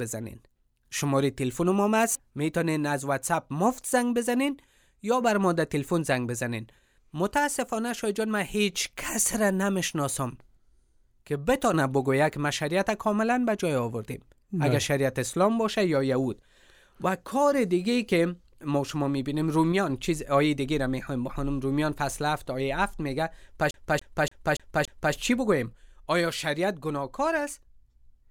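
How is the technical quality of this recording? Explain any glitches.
One glitch affects the speech, near the end. From 23.71 to 25.14 s there is a CD stuck on one turn. A scratch throws the laser back a track every rotation, so one 0.29 s slice repeats five times, each jump marked by a brief mute. It sounds like a fast, even stutter. A waveform shows five identical blocks separated by tiny silent gaps, and a spectrogram shows the same patch tiled at regular intervals.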